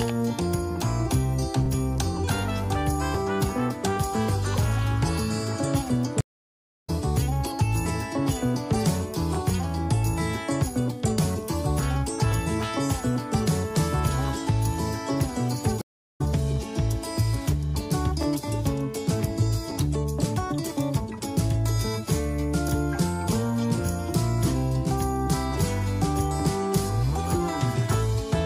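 The stream connection dropped twice and the player reconnected with a fresh decoder, so this audio goes silent at 6.21–6.90 s (about 0.65 s) and 15.81–16.21 s (about 0.33 s), resuming each time roughly 0.4 s further on, which is the stream reconnect signature.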